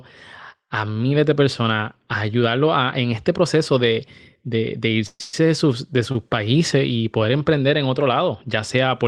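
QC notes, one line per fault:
5.06 to 5.34 s, call audio freeze, two in a row: right after "este proceso de de" the last sound hangs on as a fading buzz for about 135 ms, with roughly 30 ms of silence in there, then another 122 ms. It picks back up at "de sus" with nothing lost, just landing about a quarter second late. Likely packets got held up and the jitter buffer ran dry.
6.12 to 6.15 s, short stall from a late packet: one packet misses its slot, so the receiver stretches the last sound by 30 ms and you get a slightly held, faintly buzzy moment. It then carries on from the same spot, so nothing is missing and everything after sits 30 ms later.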